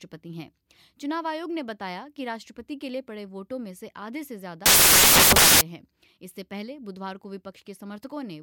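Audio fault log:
4.66–5.61 s, samples built from the wrong bytes: misaligned byte assembly promotes fast-changing low bits to the top of each value, producing loud, harsh broadband noise.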